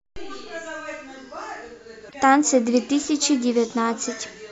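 At 2.05 to 2.15 s, damaged data in the compressed stream makes the decoder lose sync and hunt for the next frame, giving a brief glitch in the speech.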